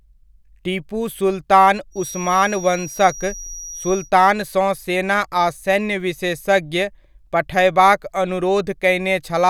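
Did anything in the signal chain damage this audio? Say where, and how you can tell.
Yes. From 1.9 to 4.12 s, just after "टीपू सुल्तान", a thin feedback whistle at 5.8 kHz sits roughly 15 dB under the speech, swelling and fading slowly in level. It is likely an acoustic loop from loudspeaker back into the microphone, held right at the edge of feedback. Unlike mains hum it is high-pitched, and unlike runaway howl it never grows.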